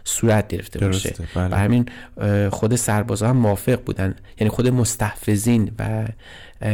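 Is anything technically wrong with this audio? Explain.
Yes. Hard clipping runs throughout the speech: the signal is driven about 6 dB past the maximum level, so about 3% of samples are cut flat, adding crackly high harmonics.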